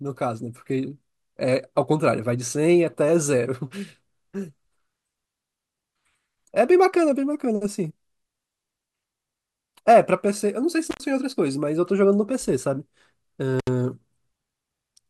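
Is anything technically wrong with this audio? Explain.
Yes. There is an intermittent contact fault at 10.89 to 11.01 s and again at 13.59 to 13.68 s. A loose plug or cable connection briefly opens and the signal path breaks. The speech drops out for about 89 ms the first time and about 70 ms the second. Each gap has crackle at its edges as the contact breaks and remakes, and faint hiss is left while the line is open.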